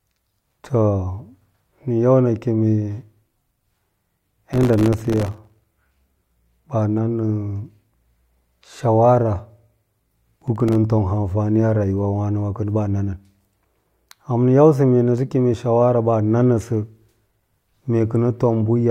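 Speech with processor overload crackle at 4.53–5.64 s and 10.34–10.75 s, where very short buffers repeatedly missed their deadlines and dropped to silence, tearing the sound.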